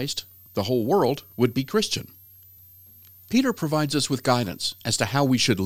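Switching supply whistle runs throughout: a switching power supply running in audible burst mode or beating with another leaves a thin whistle drifting between 12 and 14.1 kHz, roughly 30 dB under the speech.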